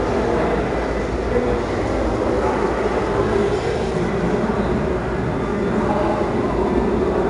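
A gritty hiss rides on every loud moment across the whole audio, with roughness on sharp attacks and nothing above 10.7 kHz, leaving it dull. This is 4-bit ADPCM compression: each sample is coarsely coded as a small step from a prediction, and the bandwidth limit fits a rate near 88 kbps.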